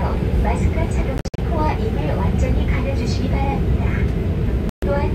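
At 1.18 to 1.38 s the sound breaks up into a cluster of short holes, about 145 ms missing in all, the longest gap 58 ms. At 4.69 to 4.83 s a single silence of about 131 ms follows. Both fit a likely Bluetooth dropout, with packets missing their delivery deadline. Each hole cuts in abruptly or with a fade of a few milliseconds, and the sound returns further along, as if it had kept playing. A stall would instead pick up exactly where it stopped.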